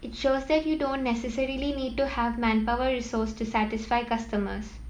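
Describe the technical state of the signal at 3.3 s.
At 3.3 s a thin, high whistle sits under the speech, its pitch wandering between about 8.8 and 9.0 kHz and its level roughly 45 dB below the voice. It runs through the whole clip, so this moment is no exception. It is a switching supply whistle: a switch-mode power supply is cycling in an audible burst mode or beating against another supply, and its drifting tone leaks into the audio path.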